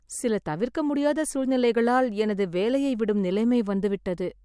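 Speech recording with no technical faults heard anywhere in it.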